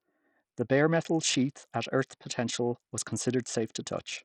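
From start to finish the speech carries heavy damage from what is likely Bluetooth SBC compression, and the amount of damage points to a starved setting of around 64 kbps. With so few bits to share out, the codec gives the upper sub-bands next to nothing, so the treble keeps dropping away and flickering back. The coarse quantisation of the remaining bands adds a gritty, grainy layer and some metallic aliasing over the whole clip.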